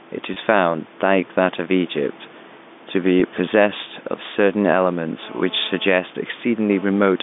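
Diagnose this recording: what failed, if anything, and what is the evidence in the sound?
Gain pumping runs through the whole recording, at the call-processing stage. The room noise floor sits about 31 dB under the speech, and the gain swings around 5 dB. The likely cause is input gain set far too high, with a fast limiter or compressor pulling it back on each peak. On a waveform the envelope looks flattened, and a spectrogram shows the noise band breathing in level between utterances.

Packet loss with pitch repetition is a network fault at two points. At 0.34 s, about 20 ms goes missing, which fits two lost 10 ms packets. At 3.2 s, about 10 ms goes missing, consistent with one lost packet. The receiver filled each gap by repeating the last pitch period, so both sound like a brief held, buzzy note rather than a dropout. A spectrogram shows the harmonic stripes frozen flat for that instant. 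The waveform shows identical cycles copied side by side.

GSM phone buzz enters the analogue wiring from 5.23 s to 6.85 s. A nearby phone doing a data transfer emits radio bursts at 217 Hz, and the audio circuit rectifies them into a hard, raspy buzz about 25 dB under the speech that comes and goes in patches. A spectrogram shows a dense comb of harmonics spaced every 217 Hz up to the 3.6 kHz top of the telephone band, ignoring the speech. The waveform carries a sharp-edged pulse train.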